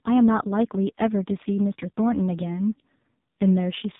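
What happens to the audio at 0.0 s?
From the first sample at 0.0 s the speech carries heavy AMR narrowband mobile codec damage, and it lasts the whole clip. Nothing above about 3.8 kHz survives, leaving a muffled telephone band. The codec rebuilds the voice from a vocal-tract filter fed by a few pulses per short subframe, and at this depth the result is buzzy and synthetic, which fits one of the lowest AMR-NB modes, around 5 kbps.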